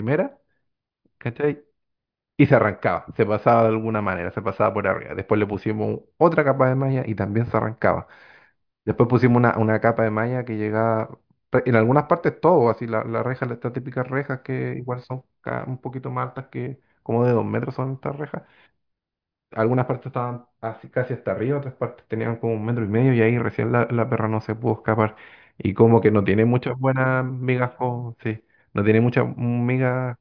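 Listening to this speech recording, nothing stood out as a technical problem at any point.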